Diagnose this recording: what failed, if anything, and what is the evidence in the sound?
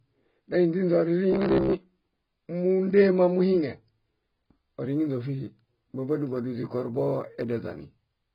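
Codec stage: the whole recording is dull and smeared with nothing above 5.1 kHz, likely heavy AAC compression at a bitrate fitting 16 kbps, unlike a plain low-pass filter.

Buffer stage: from 1.33 to 1.73 s, a rigid metallic buzz at 66.8 Hz, likely robotic sound from repeated short buffers, each roughly 15 ms, replacing most real audio.

Converter stage: from 4.87 s to the end, sample clock jitter adds a roughness about 45 dB down that grows with loud, bright sound and vanishes in silence, unlike steady noise.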